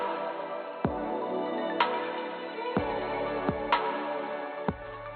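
Nothing in the clip stands out as a technical fault; it just runs along without any glitch worth pointing to.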